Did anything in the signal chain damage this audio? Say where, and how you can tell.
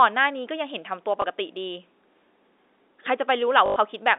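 Yes, at the network stage: packet loss with last packet repeated. A 20 ms gap at 1.22 to 1.24 s is filled by a repeat, fitting one lost packet. From 3.66 to 3.76 s, 100 ms of repeats buzz robotically near 50 Hz. Joins seldom line up with the pitch.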